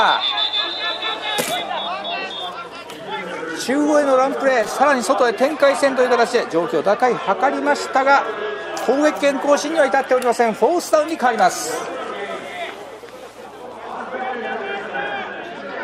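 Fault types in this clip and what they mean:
Loose connector crackle: an intermittent contact somewhere in the signal path opening and closing as it shifts, chopping the audio and adding clicks. It comes as two short irregular bursts, at 4.63 to 4.71 s and a longer one at 13.68 to 13.92 s. On the waveform these appear as jagged dropouts and sharp spikes; on the spectrogram, clusters of thin vertical broadband streaks spanning the whole frequency range.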